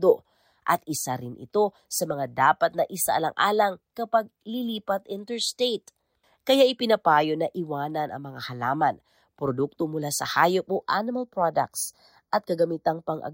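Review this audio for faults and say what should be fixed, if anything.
From 10.67 s to 13.33 s, right after "produkto mula sa hayop", the speech turns hollow and phasey. This is channel delay (comb filtering). One channel runs roughly 0.2 ms late. Summed to mono, the channels cancel at evenly spaced frequencies, starting near 3 kHz. Time-align both channels before folding to mono.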